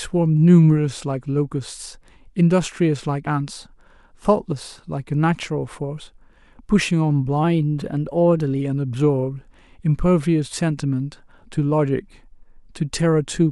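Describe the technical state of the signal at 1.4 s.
At 1.4 s the speech signal is intact, with no audible fault at that moment.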